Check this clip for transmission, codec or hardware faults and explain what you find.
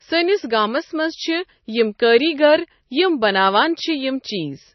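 One codec fault runs through the whole recording. A likely MP3 compression stage, consistent with about 24 kbps, removed everything above 6 kHz and switched weak frequency lines on and off, leaving the speech dull, watery and swirling.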